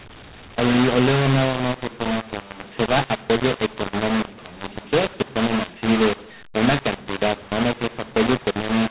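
From start to finish the speech carries a mu-law and A-law mixup: samples written with A-law companding are being expanded as if they were mu-law, so the level mapping is scrambled. Loud stretches turn harsh and gritty, and the pauses fill with hiss because the quietest codes land well above silence. Unlike plain clipping, the damage reaches quiet passages too, and it is layered on the expected 4 kHz telephone band of the A-law coding.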